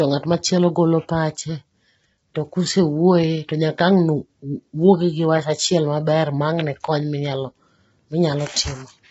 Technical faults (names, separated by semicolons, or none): low-delay AAC compression